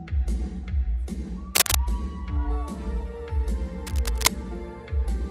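At 1.55 s there's a burst of cable scratch noise lasting about 0.2 s, a dense, ragged rustle sitting a bit louder than the sound itself. It comes back at 3.87 s for about 0.4 s, this time roughly level with the sound. That uneven scratching is what you get when contact resistance jumps around, most likely from a worn cable or connector being moved while recording.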